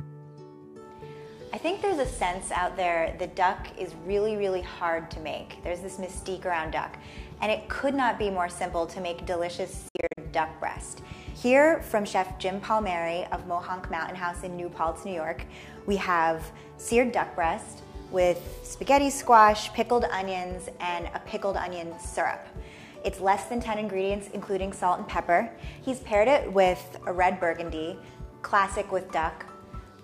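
From 9.88 to 10.18 s the sound breaks into several short silent holes, 183 ms missing in all and the longest 61 ms, then carries on as if it had kept playing. A Bluetooth dropout likely caused this, fitting roughly nine packets arriving too late.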